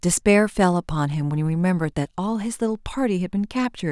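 No technical faults can be heard anywhere in the speech recording. There is nothing in it that needs a timestamp or a fix.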